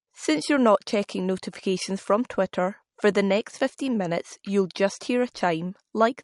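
From start to finish the speech has nothing above 11.1 kHz, and a plainly audible watery, swirling texture sits on top of it. The likely cause is MP3 compression, with the damage level pointing to a bitrate of roughly 50 kbps. Short of bits, the encoder has cut the treble at a fixed frequency and dropped weak spectral lines that flicker on and off between frames. This removes the airy top of sibilants and leaves metallic chirps on the s sounds.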